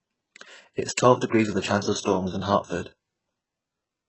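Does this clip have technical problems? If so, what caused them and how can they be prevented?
Yes. The speech was likely squeezed through HE-AAC compression at a very low bitrate, around 8 kbps to judge by the damage. Only the lower band is truly coded, and the treble up to the 8 kHz ceiling is synthesised from copied lower bands, so s sounds come out gritty and lispy, and harmonics smear. Encoding at a higher bitrate, or with plain AAC, would keep the real treble.

Pre-echo appears at 2.01 to 2.06 s, spreading 49 ms, and at 2.82 to 2.86 s, spreading 42 ms. Each time the transform block's quantisation noise, sized for a sharp onset late in the block, leaks into the quiet just before it, leaving a brief hiss and a softened attack. More bits or shorter transform blocks around transients would prevent it.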